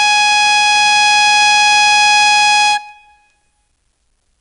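Music throughout, with 4-bit ADPCM compression at 88 kbps: gritty hiss rises and falls with the level and smears sharp attacks, unlike steady background hiss, and nothing above 10.8 kHz suggests a low sample rate.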